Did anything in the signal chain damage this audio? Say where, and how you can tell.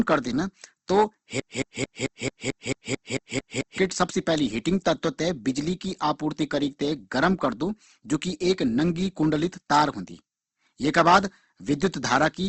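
Yes. At the codec stage, the whole clip is band-limited, with nothing above about 8.2 kHz, and the speech has a rough, grainy texture instead of clean transients. This points to Opus compression, likely, in its CELT music mode at a low rate that fits roughly 16 kbps. When bits run short, the encoder keeps each band's energy but fills fine detail with folded or noise content. On a spectrogram, energy stops at a flat 8.2 kHz ceiling, and harmonics look smeared and speckled.

From 1.40 s to 3.78 s there is a broken-record loop. A 0.22 s fragment repeats back to back, 11 times, and the audio that belonged in that span never plays. This likely comes from a stall in playback, the stream or the buffer, which kept re-sending the last fragment it held. On a waveform, the same 221 ms shape recurs at identical spacing. On a spectrogram, it shows as a strip of vertical repeats with hard joins at each seam.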